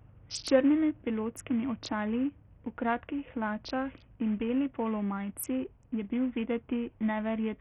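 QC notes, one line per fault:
Throughout, Bluetooth SBC compression: the speech has likely passed through a Bluetooth link using the SBC codec with a very small bit pool, consistent with roughly 48 kbps. With so few bits to share, the upper sub-bands are starved and the lower ones coarsely quantised. The treble thins out and flickers in and out, while a gritty, grainy noise and aliasing ride on every syllable. The damage is heavy and continuous.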